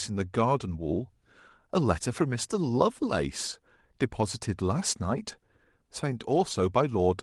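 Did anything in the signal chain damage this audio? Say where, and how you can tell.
No, nothing damaged this audio.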